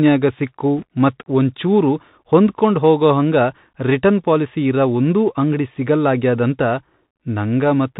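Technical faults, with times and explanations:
Throughout, Bluetooth CVSD headset codec: the speech sounds narrow and boxy, with nothing above 4 kHz, scratchy s sounds and a granular hiss underneath. A one-bit up/down coder, which fits a 64 kbps headset link, lets loud high sounds outrun its adaptive step.
0.78–0.84 s, bit errors on a Bluetooth voice link: a short burst of rushing, crackly noise appears, but there are no sharp clicks. Flipped bits each nudge the waveform only slightly and then fade, and an error rate of roughly one percent produces this grainy texture.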